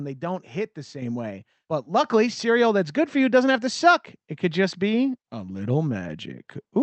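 At 1.02 s, just after "they don't hit the", the call software judged the microphone too quiet and raised its input volume in a single step of about 6 dB. At 2.04 s, after "way but", it stepped the microphone volume up again by about 4 dB. Each time the speech and the background noise jump louder together in mid-phrase, with no fade, heard over a call path whose highs stop near 8 kHz.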